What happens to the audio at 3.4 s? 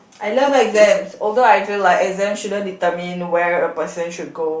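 At 3.4 s the speech carries on intact, with no dropout, click, distortion or other audible fault.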